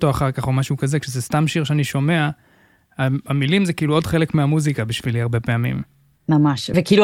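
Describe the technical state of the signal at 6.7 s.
At 6.74 s one compressed frame, about 32 ms long, is skipped by the decoder, so the speech jumps ahead roughly 30 ms.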